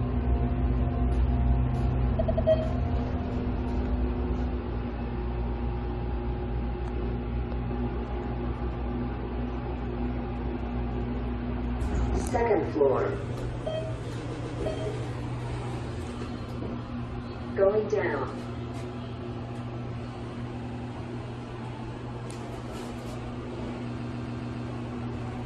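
Stutters at 2.20, 14.32 and 20.61 s, and a longer one at 23.98 s, replay the same short block. These are repeated frames: a block of about 93 ms, or 139 ms at 14.32 and 23.98 s, is decoded two to five extra times, adding about 1.5 s in all.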